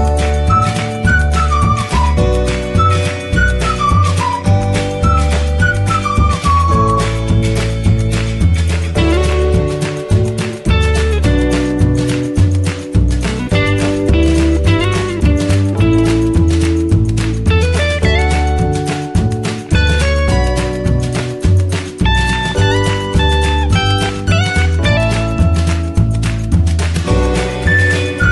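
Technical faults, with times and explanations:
There are no technical faults to report in this clip. Nothing in the audio calls for a time or an explanation.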